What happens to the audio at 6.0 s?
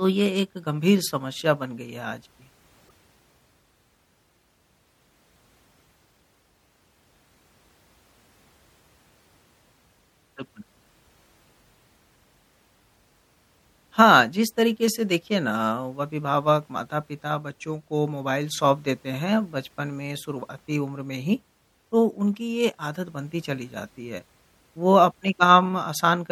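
At 6.0 s the speech carries the same damage heard across the whole clip: a watery, swirling texture, dulled treble and metallic chirps on s sounds. This is likely MP3 compression at a low bitrate, around 64 kbps, where the encoder cuts high frequencies and switches weak spectral lines on and off between frames.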